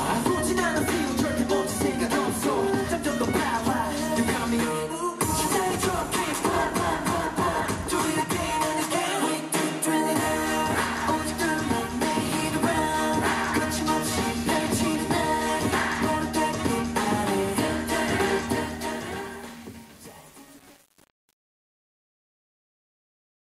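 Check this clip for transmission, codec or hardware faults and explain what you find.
One fault is present: truncation distortion on the fade-out. From 18.46 s to 23.59 s, as the sound fades to the end, the quiet tail turns gritty. The fade stage kept too few bits without dither, which fits roughly 7-bit resolution, so low levels collapse into coarse square steps.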